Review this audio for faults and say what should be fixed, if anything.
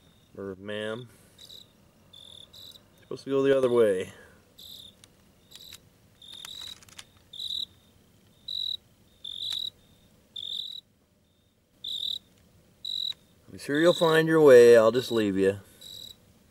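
One channel drops out, likely through an intermittent stereo connection, at 0.54 to 1.09 s, 3.53 to 3.63 s and 10.61 to 11.73 s. With only one side feeding the mono sum, shared content falls abruptly by about 6 dB, and anything unique to that side vanishes. Secure and test both channel connections before recording, and monitor each side's level separately so a dropout shows up immediately.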